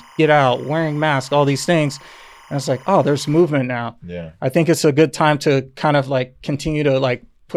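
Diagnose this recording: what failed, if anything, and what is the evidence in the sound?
Timecode bleed in the analogue wiring: from the start to 3.41 s there's a chirpy warble around 1 and 2 kHz, about 30 dB under the speech, switching at 25 frames a second.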